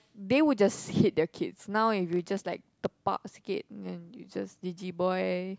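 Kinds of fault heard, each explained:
Block size mismatch (padded): Each block arrives short and is topped up with silence, giving a 33.2 Hz buzz from 2.04 to 2.86 s. Speed drops only slightly, to 0.996.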